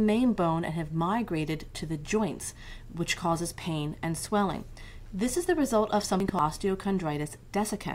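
At 4.29 s a corrupt FLAC frame produces a faint glitch. Damaged bits in three frames sent the decoder's prediction onto wrong values, but the error peaks at only about -50 dBFS, showing as a faint hairline spike on the waveform and a thin vertical streak on the spectrogram.

From 6.02 to 6.39 s, compressed frames were skipped, so the audio jumps ahead by roughly four tenths of a second. Lossless frames do not overlap, so the join is a hard click, seen as a discontinuity in the spectrogram's patterns with a sharp line rather than a blurred edge.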